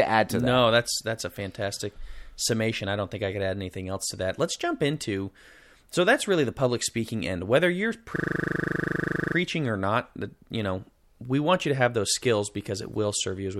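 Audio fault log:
8.16–9.36 s, system hang loop: The speech stops moving forward, and one 40 ms fragment repeats about 30 times. The playback system seems to have frozen while the sound hardware kept cycling through the same small ring buffer. Because the loop is short, the repeats merge into a steady, rough buzz at 25 Hz rather than a distinct stutter. This fits a 40 ms buffer. Little or no speech appears to be lost once playback resumes.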